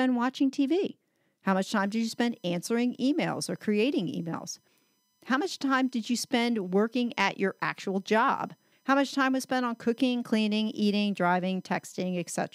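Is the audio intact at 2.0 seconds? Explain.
No. USB whine runs from 1.83 s to the end. Current drawn in the bus's 1 ms frames leaks through power or ground, giving a steady fixed-pitch whine at 1 kHz with its strongest harmonic at 19 kHz, roughly 40 dB below the speech.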